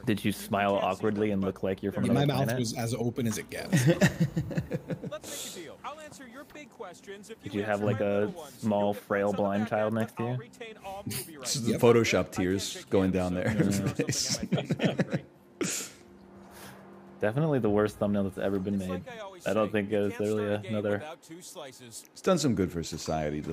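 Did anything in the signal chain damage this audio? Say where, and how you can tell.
No, nothing in the audio stood out on listening as damage from any stage of the signal chain.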